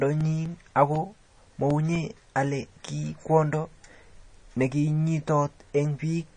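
Right from the start the speech carries a watery, swirly quality, and there's nothing at all above 9.8 kHz, so the top end sounds dull. That's the classic signature of MP3 compression, likely at a low bitrate around 32 kbps. The encoder runs short of bits, chops the treble at a fixed point, and keeps dropping weak frequency lines in and out frame to frame. That flickering gives the sibilants a metallic chirp and softens the attacks.

Between 0.21 and 2.21 s you get periodic USB or driver dropouts: a string of about ten little ticks spaced every 0.25 s, each one a gap of a couple of milliseconds where the audio just drops to silence. The metronome-like regularity points to a background task stalling the USB bus or the audio driver on a fixed schedule, so a tiny slice of signal never makes it through each time.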